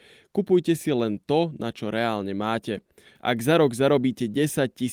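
No technical faults can be heard anywhere in the recording.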